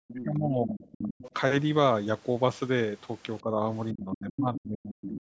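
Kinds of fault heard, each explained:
Other side's voice leaking through: The echo canceller likely failed to remove all of the far end's loudspeaker sound from the microphone, so a second voice slips through at roughly 15 dB below the talker. It appears from 0.08 to 0.24 s, again from 0.74 to 1.31 s, as a brief flicker at 4.54 s, and as a last scrap from 5.05 s to the end.
Speech suppressed in double talk: With both sides talking at once, the echo canceller likely could not separate the talker from the loudspeaker echo and turned the whole signal down. The talker's speech sinks by around 30 dB from 0.09 to 1.24 s. A milder dip of about 10 dB follows from 3.42 to 3.62 s. The deepest cut, around 40 dB, runs from 3.93 s to the end.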